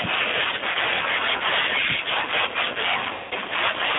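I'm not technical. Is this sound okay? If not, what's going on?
No. Two things are wrong with this speech recording.

The whole clip has gone through the G.729 codec, a compression method used for internet phone calls. It rebuilds the voice from a simplified model of the throat and pitch instead of storing the actual sound. That is why the voice sounds slightly rough and artificial, not just muffled. The treble also stops at about 3.6 kHz and the deepest bass is gone, which gives it a thin, telephone sound.

There are also two moments of VoIP packet loss concealed by the speech codec. At about 0.72 to 0.78 seconds, a tiny piece of audio went missing, roughly 30 milliseconds. At about 3.13 to 3.34 seconds, a much longer piece went missing, roughly 180 milliseconds. Instead of going silent, the decoder kept repeating its last guess of the sound and let it fade. You hear a brief buzzy or smeared stretch rather than a clean gap, and the voice stays weak for a moment after the signal comes back.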